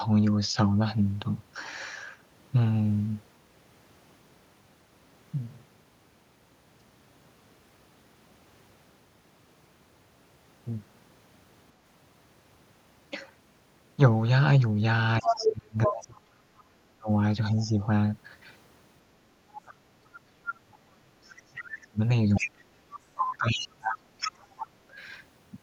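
Speech suppressed in double talk runs from 15.21 to 17.83 s. For roughly 2 s of that span the talker's speech dips by as much as around 40 dB and drops out in pieces. The likely cause is the echo canceller failing to separate the talker from the loudspeaker echo of the far end while both spoke, so it turned everything down. During the same stretch, the other side's voice leaks through from 15.22 to 15.93 s at about the same level as the talker. A much fainter scrap, roughly 30 dB down, comes through at 17.60 to 17.67 s. This residue likely comes from far-end sound that the canceller left in the microphone signal.

A longer suppression episode runs from 19.27 to 24.97 s. Roughly 5 s of the talker's speech is chopped and pushed down, again by up to around 40 dB, as the canceller clamps both voices. Leaked far-end fragments grow stronger across this stretch. The first is a brief blip at 21.59 to 21.63 s, roughly 20 dB down. 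Next comes one at 22.35 to 22.51 s, about 10 dB down. The last is a sustained stretch from 23.17 to 24.30 s, only about 5 dB below the talker.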